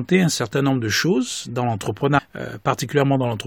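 Speech clip with damaged data in the compressed stream at 2.17 to 2.19 s, right after "nombre de choses dans". Corrupted frames make the decoder lose sync, giving a brief glitch.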